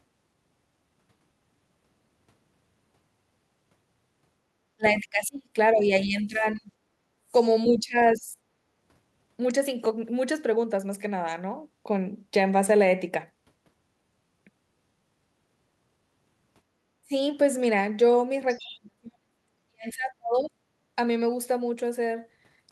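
From 4.76 to 6.72 s, the echo canceller likely mistook simultaneous talk from both ends for echo and clamped the microphone. This is speech suppressed in double talk: the voice sinks by about 30 dB. At 7.14 s, for about 0.2 s, the canceller closed hard while the loudspeaker played, gating the background. The room sound drops by about 24 dB, then returns. From 7.71 to 8.38 s, double talk again likely triggered suppression, a shallower dip of about 15 dB. At 17.02 s it likely bit briefly, a short deep cut of about 30 dB. From 18.49 to 18.74 s, leftover loudspeaker pickup likely escaped cancellation, so the other side's voice leaks through about 20 dB below the talker, faint. Overlapping it, from 18.59 to 20.59 s, double-talk suppression likely struck hardest: the voice drops by as much as 40 dB, for about 1.5 s in total.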